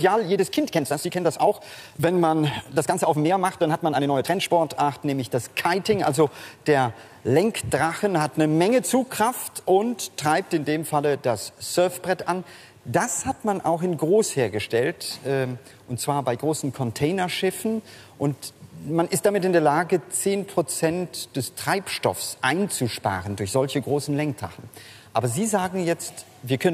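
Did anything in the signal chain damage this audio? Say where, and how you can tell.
Yes: 0 to 4.54 s is a time-stretched section, running 1.43 times fast, rushed at steady pitch. Likely software dropping short pieces during processing.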